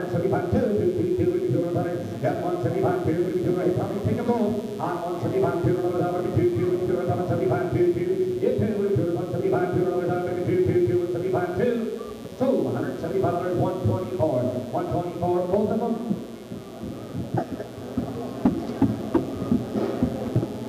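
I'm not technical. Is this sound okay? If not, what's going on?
No. A steady, raspy mains buzz runs under the whole clip, from start to finish. Electrical interference, probably from a dimmer, power adapter or poorly shielded cable, is leaking in from the 60 Hz power supply. It sits clearly below the main sound but stays audible throughout.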